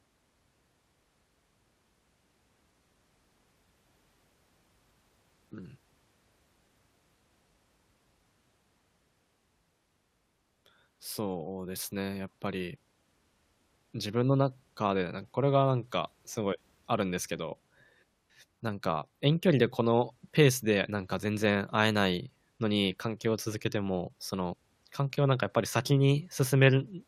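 Speech recording, no technical faults found.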